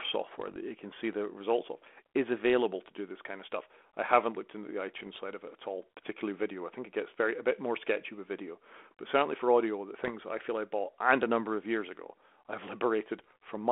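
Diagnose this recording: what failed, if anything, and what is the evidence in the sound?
Bit errors on an ADPCM link, at the transmission stage, cause pops and rough bursts at 0.40–0.57, 4.98–5.18, 10.02–10.13 and 13.19–13.50 s. Flipped bits corrupt the decoder's step size and predictor, so each error rings on briefly. A waveform shows spikes and level jumps, and a spectrogram shows vertical smears within the 3.4 kHz band of the 32 kbit/s G.726 line.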